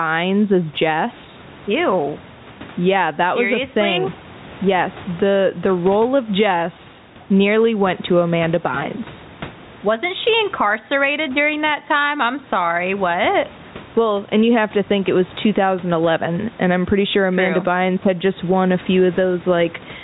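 Gain pumping runs throughout the speech. The gain swings by around ten decibels, likely from excessive input gain with a fast limiter. Loud and soft parts end up closer in level, and the speech sounds squashed.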